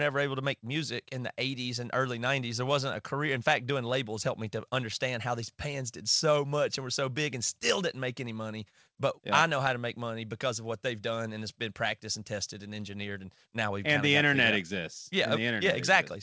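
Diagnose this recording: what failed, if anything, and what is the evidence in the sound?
Nothing has failed here: the speech arrives intact through the call path, and the band stopping at about 8 kHz is simply what a wideband codec such as G.722 delivers.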